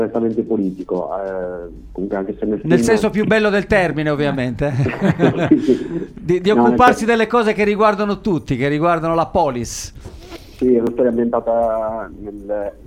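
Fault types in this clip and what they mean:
Audio missing between chunks: tiny skips at 2.88, 6.88 and 10.87 s, about 4.0 s apart, each dropping only a few milliseconds. The regular spacing points to a likely cause in a recorder or processor working in 4-second blocks that loses a sliver at each handover, then butts the two sides together with no gap. On a waveform each join shows as an abrupt step or kink; on a spectrogram, a thin vertical line.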